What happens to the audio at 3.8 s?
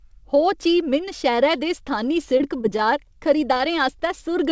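The speech turns choppy from 3.54 to 4.02 s. This is repeated packet loss: four short gaps, the longest 20 ms, are patched by stretching the preceding sound, so about 13% of that stretch is filled-in rather than real.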